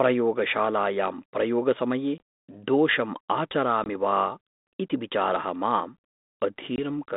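At 2.18 to 2.20 s, 3.84 to 3.89 s and 6.76 to 6.79 s the speech drops into hard-edged silence, each hole about 20 ms, roughly one lost packet. This is packet loss on an ADPCM call. The decoder's adaptive predictor and step size lose track of the sender's, so the speech returns with brief, slight distortion that settles over some tens of milliseconds. A PCM dropout would resume cleanly.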